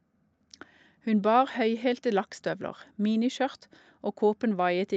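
No technical faults can be heard in this speech clip.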